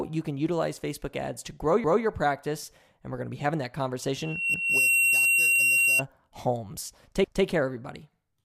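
At 4.18 s a loudspeaker feedback squeal begins: a 2.7 kHz tone builds over about 0.4 seconds to a few decibels above the speech and holds until 6.02 s. At 4.54 s and again at 7.24 s, overlapping chunks replay 200 ms of audio at each join, heard as a brief stutter from roughly 2.5-second chunks.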